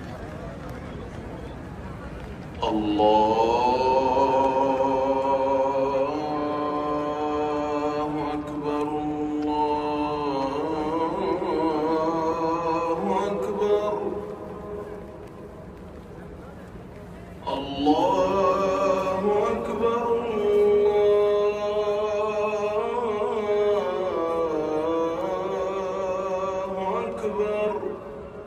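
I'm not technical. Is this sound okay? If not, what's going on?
Yes, the sound is okay: nothing in it points to a technical problem, so there is nothing going on that needs fixing.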